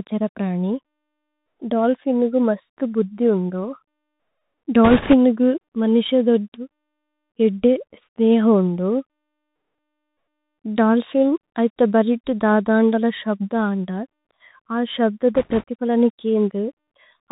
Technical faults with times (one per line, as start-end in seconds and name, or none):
0.00-17.31 Bluetooth CVSD headset codec
4.84-5.14 bit errors on a Bluetooth voice link
15.35-15.64 bit errors on a Bluetooth voice link